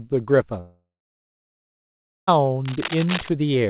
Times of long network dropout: 0.60-2.29

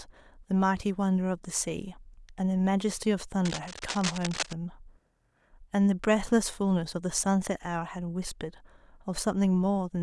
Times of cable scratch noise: 3.45-4.53

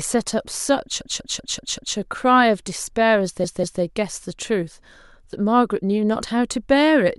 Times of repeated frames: 1.01-1.97, 3.44-3.82

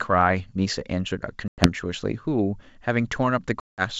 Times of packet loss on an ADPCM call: 1.48-1.69, 3.60-3.83

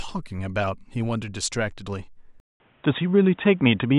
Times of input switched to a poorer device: 2.40-3.98

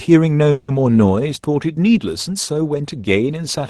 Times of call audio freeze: 0.51-0.70

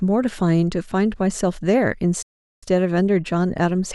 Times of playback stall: 2.22-2.63

